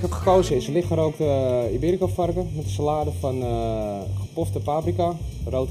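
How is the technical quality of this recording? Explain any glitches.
Channel delay (comb filtering) runs from 0.50 s to the end at 5.71 s. One channel lags by about a third of a millisecond before the mono sum, cutting evenly spaced notches from around 1.5 kHz upward, so the sound turns hollow and phasey.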